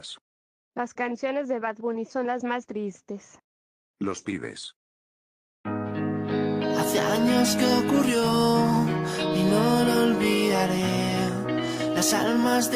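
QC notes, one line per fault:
No technical faults turn up anywhere in the signal.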